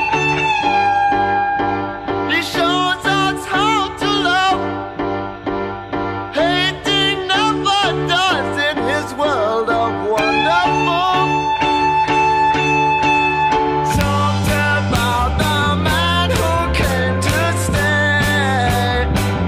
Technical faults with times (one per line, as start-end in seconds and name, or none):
10.19 integer overflow
14.01 integer overflow
14.96 integer overflow
16.36 integer overflow
17.29 integer overflow